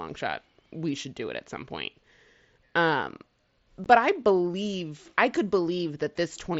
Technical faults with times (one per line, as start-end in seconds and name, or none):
3.84 unconcealed Bluetooth headset packet loss